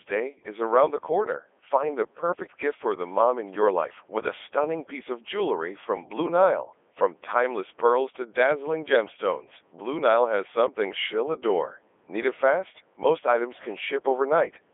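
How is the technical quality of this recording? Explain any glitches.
Technical quality is poor, because the whole recording has passed through a very low-rate speech vocoder.

Codec 2 vocoder, throughout: only pitch, voicing, energy and a coarse spectral envelope survive, and sine-wave synthesis rebuilds the speech. The result is robotic and buzzy, band-limited to roughly 300 Hz–3.5 kHz with nothing above 3.7 kHz. The heavy damage fits Codec 2's 3.2 kbit/s mode.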